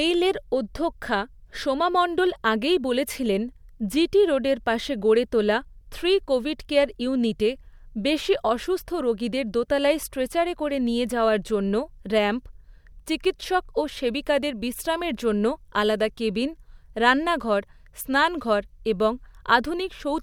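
No technical faults are audible in the speech.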